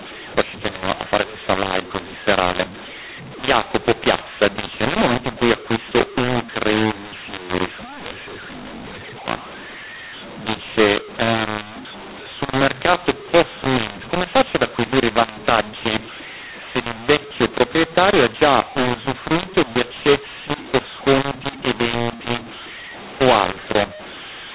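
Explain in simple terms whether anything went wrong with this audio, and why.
Something did go wrong, and it affects the whole clip from start to finish: a mu-law and A-law mix-up. The speech was stored in telephone G.711 format using the A-law scale, but it was played back as if it used mu-law. The two scales translate loudness differently, so levels come out scrambled. That makes the speech sound harsh and distorted, and it fills the quiet gaps between phrases with noise instead of silence.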